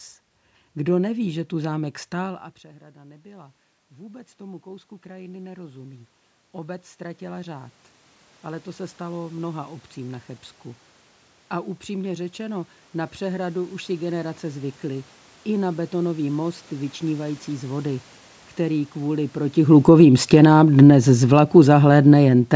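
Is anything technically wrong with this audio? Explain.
Yes, there are two gain-control problems, both triggered by the talker shifting position.

From 1.3 s to 10.34 s there's automatic gain rising. Around 2 s the talker drops back and the level falls by about 22 dB, so the AGC slowly adds about 16 dB over several seconds. You hear the voice and the room noise swelling up together.

From 19.57 s to 22.51 s it's automatic gain falling. Near 19.5 s the talker shifts position, and the AGC reacts by pulling its gain down about 8 dB. The speech sinks along with the background.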